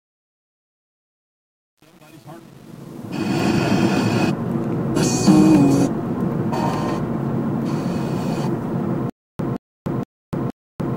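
A gain stage applying the fade-in from 0.0 to 3.51 s kept only about 8 bits and added no dither, producing truncation distortion on the fade. Through 3.33 s the quietest part collapses into coarse square steps, so the rising sound is gritty.

From 9.10 s to the end, the player likely stalled and replayed its last buffered fragment at each retry, causing a stutter with silent gaps. A 172 ms burst repeats four times, every 468 ms, separated by about 296 ms of digital silence, and the intervening audio is lost.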